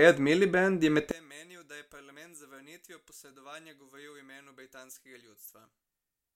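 From 1.11 s to the end, the speech collapses by about 25 dB. Only a faint residue remains. This is likely one channel inverted, cancelling in mono.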